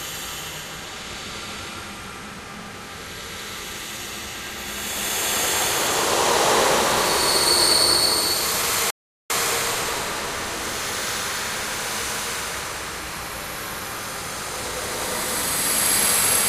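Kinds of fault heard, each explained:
Playback stall: the sound cuts to silence at 8.90 s and resumes at 9.30 s, a gap of 394 ms. The gap is likely the player running out of buffered data or its output thread being blocked, leaving the output empty until it recovered.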